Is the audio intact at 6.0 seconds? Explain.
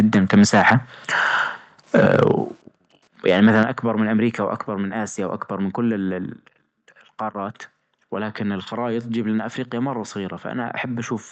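Yes, at 6.0 seconds the speech is intact, with nothing breaking up the audio at that point.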